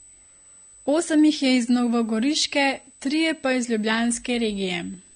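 A speech recording with two faults that last the whole way through. A steady, high-pitched USB whine sits under the voice. Its fundamental is at 8 kHz, with the strongest component at 16 kHz. It is roughly 20 dB below the speech. The bus's 125-microsecond microframes are leaking current into the audio path through power or ground. The file also sounds like low-bitrate audio saved at a high bitrate. Nothing is present above 9.7 kHz. The remaining codec artefacts fit a 32 kbit/s AAC source. That source was likely re-encoded as a 192 kbit/s MP3, which cannot restore the removed detail.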